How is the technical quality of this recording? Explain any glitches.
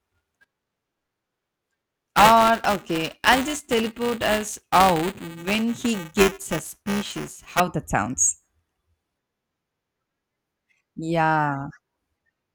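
Technical quality suffers from one fault. From 0.0 to 7.6 s, ending just before "that sounds", buffer tearing occurs: the writer and reader of the playback ring buffer have drifted, so a small slice of each buffer replays audio about ten milliseconds old. The result is a robotic 345 Hz buzz, present only while sound is playing, which fits a 128-sample buffer.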